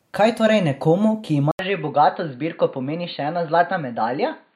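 An input switched to a poorer device, likely, at 1.51 s in this speech clip, just after "torej nekomu ki": an 80 ms silence, then nothing above 4.6 kHz through 4.55 s, so the sound turns dull, with a faint new noise floor and unchanged level.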